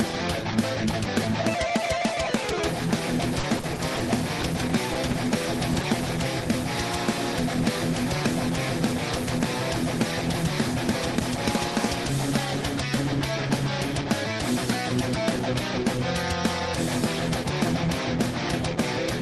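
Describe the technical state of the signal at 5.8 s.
Two short concealed packet losses bracket this moment, at 5.73 to 5.77 s and 5.81 to 5.85 s. Each time, about 20 ms of audio arrived too late. The decoder extended the preceding sound to bridge the gap. It is heard as two quick smears or wobbles.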